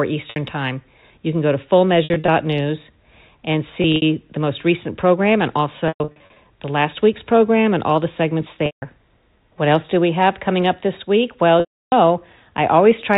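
It's a speech clip with packet loss with pitch repetition at 0.3, 2.04–2.28, 3.82–4.02, 5.88–6.36, 8.66–8.82 and 11.6–11.92 s. Short gaps come out as a brief buzzy hold, and the longer ones at 5.88 s and 11.6 s fade to silence before a cross-fade back. The G.711 telephone band keeps everything under 4 kHz.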